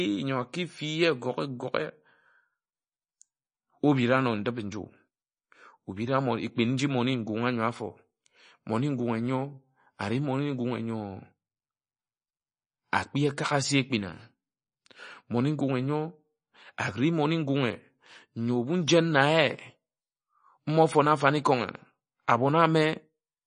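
Speech throughout carries plainly audible MP3 compression artefacts, likely from a low-bitrate encode around 32 kbps: watery, swirly texture, with nothing above 9.8 kHz.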